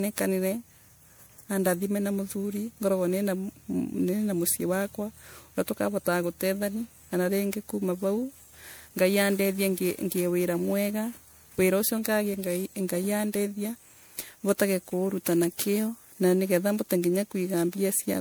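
All the way through the speech there's a swirly, hollow quality, with consonant attacks smeared and a watery shimmer in the highs, and that's what generation loss sounds like. It's likely the audio went through an MP3 decode and re-encode around seven times. Each pass requantises on a shifted frame grid, so noise and spectral holes pile up beyond what a single pass at 128 kbit/s would give, even though content reaches up to about 20.9 kHz.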